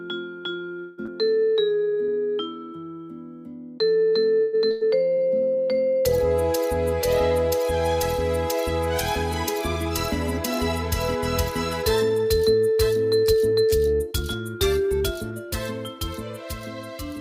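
At 0.79 s the audio likely stalls because packets were held up in transit and the jitter buffer ran dry. With nothing new to play, the receiver keeps extending the last sound for about 183 ms, until 1.00 s. It comes across as a held buzz or hiss that fades but never drops to silence. When the delayed audio arrives, playback picks up exactly where it stopped. Nothing is lost, but the call audio freeze leaves a hold in the flow.

Right after, at 1.06 s, comes a skip ahead. Later audio was already queued, so a stretch of around 150 ms was discarded. Only about 19 ms of bridging covers the join, so playback leaps forward almost seamlessly, with a piece of sound simply gone.

From 1.24 to 2.27 s the jitter buffer was short of reserve and rebuilt it by repeating single pitch periods, again and again, adding 133 ms in total. This jitter buffer slow-down drops playback to 88% speed with the pitch unchanged. 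Sounds are drawn out and can carry a faint warble.

At 4.41 s a second call audio freeze begins. Here too the likely cause is packets stuck in transit that left the buffer empty. About 122 ms of faded continuation fills the wait up to 4.55 s, and the audio then resumes with nothing missing.

At 4.71 s a burst of packet loss follows. Packets were lost or arrived too late to be played, 160 ms of audio in all. The receiver filled a 100 ms gap, until 4.83 s, by sustaining the last sound and letting it decay into a held buzz or fading hiss. Playback then continues further on, with that stretch gone.

From 5.04 to 5.56 s a second jitter buffer slow-down repeats pitch periods to restore the reserve, adding 69 ms. Playback again runs at 88% speed with the pitch unchanged, so sounds are lengthened.

Finally, from 9.85 to 15.32 s, the buffer was holding more audio than its target. The receiver cut the excess by removing short pieces of one or a few pitch periods many times over, dropping roughly 300 ms. 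This jitter buffer speed-up plays the audio at 106% with the same pitch, so it sounds hurried across that whole span.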